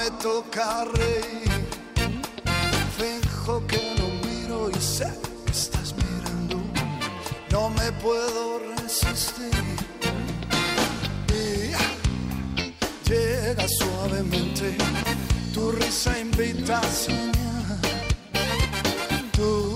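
No technical faults are audible.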